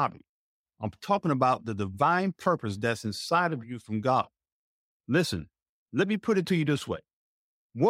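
Nothing in this speech recording stands out as a technical fault, so there's nothing to flag here.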